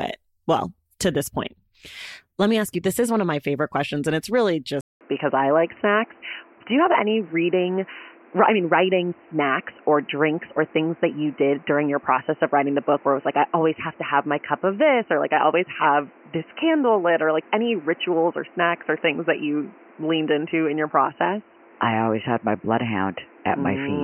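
An input switch to a poorer device is the likely cause of the change at 4.81 s, right after "questions and it's really". A gap of about 0.2 s of silence comes first, then the speech returns band-limited, with nothing above 3 kHz, so it sounds dull and boxy until the end. The level stays roughly the same, but a new noise floor appears, sitting around 30 dB below the speech.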